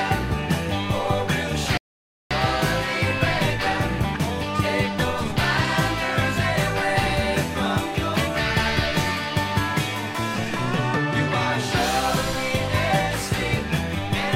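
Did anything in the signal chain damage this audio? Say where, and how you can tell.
Yes, at playback: a rebuffering stall from 1.77 to 2.31 s. The sound drops to silence for about 0.53 s, then resumes exactly where it stopped, with nothing skipped. The player exhausted its downloaded audio and paused until more data arrived.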